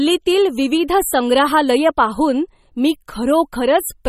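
Across this whole speech clip, the likely cause is heavy MP3 compression starved of bits, which fits a low bitrate of around 32 kbps. The treble is cut off with nothing above 15.5 kHz, and weak frequency lines flicker between frames, giving plainly audible watery, swirling codec damage.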